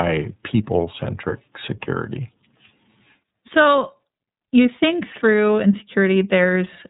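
iLBC codec artefacts run through the whole of this speech clip: nothing passes above 3.8 kHz, and each 30 ms frame's excitation is coded on its own, which fits the codec's lower bitrate mode and leaves the voice plainly rough and synthetic.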